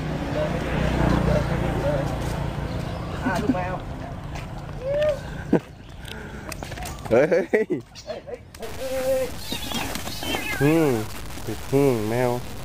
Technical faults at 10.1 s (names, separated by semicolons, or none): low bit depth without dither